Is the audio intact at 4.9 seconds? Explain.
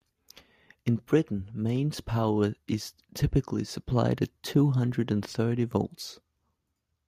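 Yes, at 4.9 s the speech plays through without any dropout, click, distortion or other audible fault.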